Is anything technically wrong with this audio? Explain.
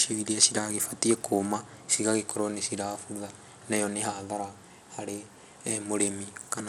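Yes. Bluetooth SBC compression, present throughout, is the likely cause: a small bit pool, consistent with roughly 96 kbps, starves the upper sub-bands and coarsely quantises the rest. The speech loses and flickers its treble, with plainly audible gritty noise and aliasing riding on it.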